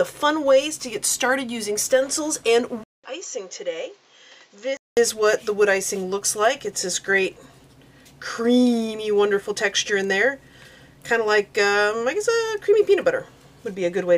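At 2.84 s the sound drops out for 200 ms. It returns duller and boxier, with nothing above 7.6 kHz. It is about 10 dB quieter, over new background noise. At 4.97 s it clears again. This is likely an input switched to a poorer device.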